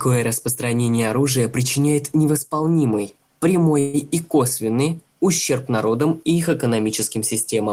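At 3.79 s there's a call audio freeze lasting until 3.96 s. The speech stalls and the last bit of sound gets stretched into a fading buzz for about 140 ms rather than dropping to silence. When it picks up again nothing seems to be missing; the speech just carries on from where it stopped, running about 140 ms later than before. That's likely packets held up in transit draining the jitter buffer, with the receiver padding the wait.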